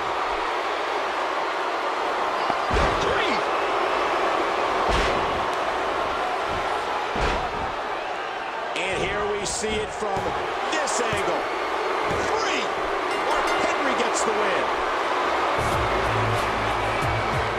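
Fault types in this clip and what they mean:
Loud pop: a sudden voltage step, likely from a plug, switch or static discharge, twice entered the signal path and was shaped into a brief pulse downstream. Each shows as a single sharp pop, about 15 dB above the sound, near 2.5 s and 12.2 s, with the audio continuing underneath.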